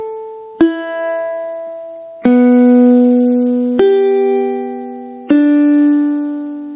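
Right from the start and through the whole clip there's gain pumping: the level keeps getting yanked down whenever the sound gets loud, then eases back up, with a swing of around 10 dB. That's most likely the input gain set way too hot and a fast limiter or compressor clamping each loud moment, so loud and soft parts sit much closer together and everything sounds squashed. Nothing comes through above 4 kHz, which fits a G.711 mu-law call path.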